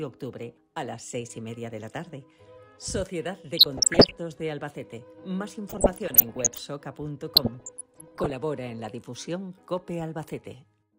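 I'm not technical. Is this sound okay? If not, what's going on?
No. DAB burbling appears at 3.57 to 4.17 s, 5.69 to 6.58 s and 7.35 to 8.36 s. Weak digital radio reception let a small share of damaged data slip past error correction. Narrow slices of the sound get short blips of noise over the audio.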